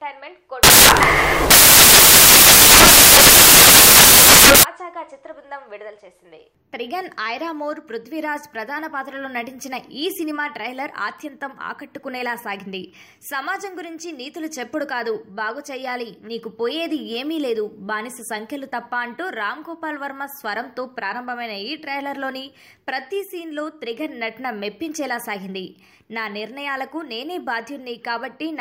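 From 0.63 s to 4.63 s the audio turns into loud, harsh broadband noise: samples built from the wrong bytes. For those four seconds the reader assembles each sample's bytes incorrectly, so the rapidly changing low-order bits land in the high-order position and dominate every value. On a waveform the section fills out to a dense block; on a spectrogram it shows as bright energy spread across the frequencies, any underlying structure buried beneath.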